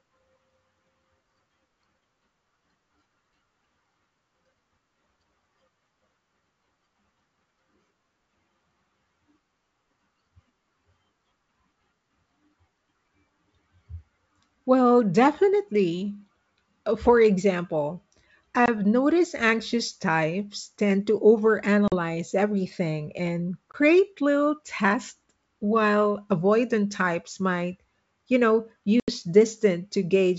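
Four dropouts from packet loss on an ADPCM call break the speech. The first runs 18.66 to 18.69 s, just before "noticed anxious types tend". The next runs 21.88 to 21.94 s. Another sits at 23.73 to 23.77 s, between "everything and" and "little tests while avoidant". The longest, 29.00 to 29.12 s, follows "you know". Each is a hard-edged silent hole. The gaps suggest one to four lost 20 ms packets. The decoder's predictor and step size lose track of the sender's. So the wideband G.722 speech comes back with brief, slight distortion before settling.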